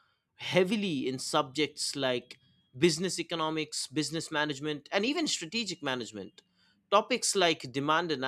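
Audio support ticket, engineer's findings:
No faults found on listening; the speech clip presents no audible defect requiring attention.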